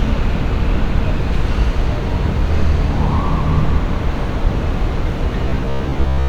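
From 5.46 s to the end at 6.28 s, robotic sound from repeated short buffers: a rigid metallic buzz near 66.8 Hz, likely from one roughly 15 ms buffer repeating while most new audio is dropped.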